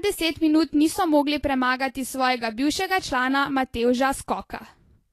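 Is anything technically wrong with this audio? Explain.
Yes, there's plainly audible Vorbis compression damage running through the whole speech clip. Nothing comes through above 14.2 kHz, and the treble just under that cut-off sounds hissy and grainy rather than crisp, so the top end has that roughened, smeared quality. The likely cause is a low-quality Vorbis encode, which fits a bitrate around 36 kbps: the encoder quantises the high-frequency detail so coarsely that it turns into noise of roughly the same energy.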